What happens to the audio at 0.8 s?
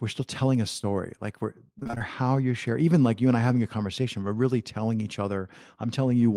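Right after "still telling a", from 0.81 to 0.85 s, there is short concealed packet loss: about 20 ms of audio arrived too late to decode, and the receiver extrapolated the preceding sound for about 17 ms before crossfading back in ahead of "like we're". It is heard as a brief smeared wobble.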